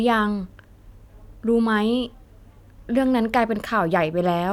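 Speech, and nothing is technically wrong with it.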